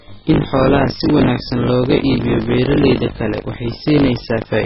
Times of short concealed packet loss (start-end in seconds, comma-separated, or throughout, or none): none